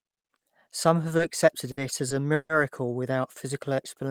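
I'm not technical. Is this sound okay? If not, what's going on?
No. Around 1.17 to 1.21 s and again from 1.71 to 1.79 s, the speech briefly hangs on one sound, stretching it with a faint buzz or dip before carrying on. This is a short stall from a late packet: a piece of the call arrived late, so the last sound was held until it caught up. Nothing is lost, but the speech is pushed back by 20 ms and then 60 ms.

From 2.34 to 2.51 s there is a longer hold. The sound drags out as a fading buzz or hiss, then drops to silence for about 60 ms before the speech resumes where it stopped. This is a call audio freeze, likely caused by the connection holding up the audio on its way. About 150 ms of extra time is added, and nothing is skipped.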